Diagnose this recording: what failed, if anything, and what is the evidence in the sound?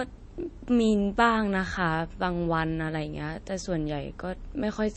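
The codec stage failed, most likely through MP3 compression at a starved bitrate. Throughout the speech nothing survives above 8.4 kHz, and a plainly audible watery swirl smears the s sounds and attacks as weak frequency lines drop in and out between frames, which fits about 32 kbps.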